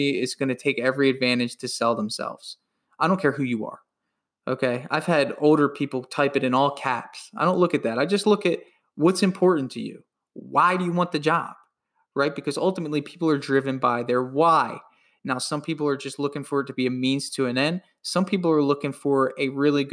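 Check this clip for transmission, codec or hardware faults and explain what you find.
No transmission, codec or hardware faults turn up anywhere in this speech recording.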